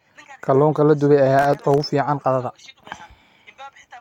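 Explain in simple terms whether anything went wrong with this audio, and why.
From 1.39 to 1.83 s the speech turns gritty and crackly. This is processor overload crackle. The computer was too busy to deliver its tiny chunks of audio on time. Around fifteen chunks, each under a millisecond, came out as brief silent gaps.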